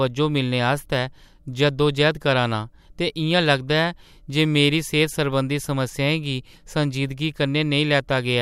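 Nothing to flag here: the speech runs along without any technical faults worth pointing out.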